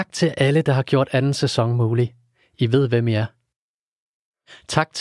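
No audible technical faults.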